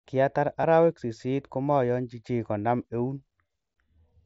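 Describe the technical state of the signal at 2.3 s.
At 2.3 s the speech is intact, with no dropout, glitch or other fault, only the light graininess and 8 kHz top end expected of the mSBC Bluetooth headset codec path.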